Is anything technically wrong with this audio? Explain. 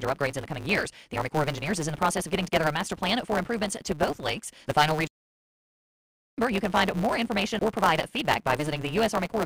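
Yes, two problems. There's a block size mismatch (truncated) through the whole clip. One stage writes bigger blocks than the next reads, which fits 512-sample blocks, and each block's tail gets dropped. That puts a 150 Hz buzz under the speech and hurries it along 1.6 times faster, with the timbre staying the same.

Then there's a playback stall from 5.07 to 6.38 s. The speech cuts out mid-flow and there's about 1.3 s of silence before it carries on. That's likely the player running dry of data or its thread getting blocked until it recovered.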